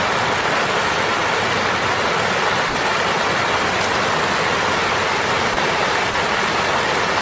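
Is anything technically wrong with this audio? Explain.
Yes. Five brief dropouts break the sound, at 0.41, 1.79, 2.69, 5.54 and 6.11 s. Each lasts 30 ms, except a 60 ms one at 2.69 s. The sound gives way to steady noise, then returns. This is likely sound dropped by the voice detector. The sender mistook audio for background and stopped transmitting, so the receiver filled the gap with comfort noise. Through the call path, nothing is heard above 8 kHz.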